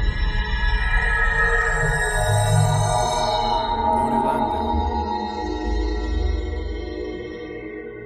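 Four sharp clicks at 0.39, 1.62, 2.46 and 4.58 s are likely dropped samples, each a handful lost, showing as thin vertical lines across the spectrogram and small steps in the waveform. From 5.0 s to the end, an adaptive stream at a lower bitrate takes over: the spectrogram abruptly loses everything above 8.4 kHz, which fits a switch from about 96 to 16 kbit/s.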